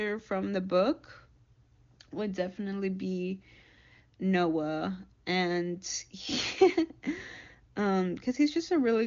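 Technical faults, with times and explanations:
No technical faults heard.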